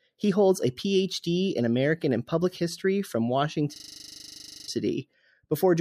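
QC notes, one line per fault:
3.76–4.68 s, system hang loop: one 40 ms slice of speech repeats exactly 23 times while the system is frozen, giving a rigid 25 Hz buzz-stutter. Unlike a dropout or jittery glitch, the repeats are identical and evenly spaced, and about a second of speech is lost.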